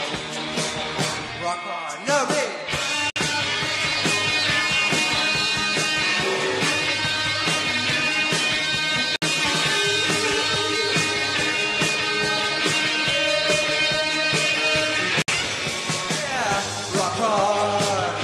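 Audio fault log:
3.10–3.16 s, 9.16–9.22 s, 15.22–15.28 s: gap at a join of encoded pieces. The audio appears to have been encoded in segments of about 6 s and joined without trimming, so each piece's start-up delay and padded final frame remain in the stream. At each join a gap of about 59 to 60 ms cuts into continuous sound with smeared edges, then the sound resumes from where it stopped, repeating every 6 s.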